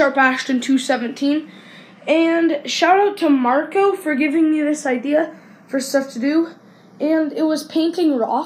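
From start to finish, the two channels are drifting apart. Each channel was clocked by a separate device, and the clocks disagree by around 30 parts per million. The timing offset between left and right therefore creeps steadily, reaching a fraction of a millisecond by the end. When the channels are summed to mono, that growing delay sets up comb-filter notches that glide slowly through the spectrum. The result is a slow, sweeping flanging across the whole sound.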